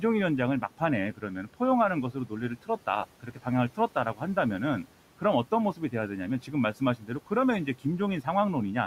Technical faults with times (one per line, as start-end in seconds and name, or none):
1.17-1.61 speech cut by the noise suppressor
2.13-2.32 speech cut by the noise suppressor
3.23-3.46 speech cut by the noise suppressor
3.77-4.37 speech cut by the noise suppressor
6.43-7.31 speech cut by the noise suppressor